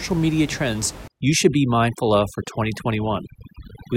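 From about 1.08 s to the end, overdone noise removal sets in. The noise reduction is pushed too hard. Bands near its noise estimate are cut almost to nothing, taking quiet speech detail too. The room noise, about 16 dB below the speech, drops and breaks up into twinkling specks.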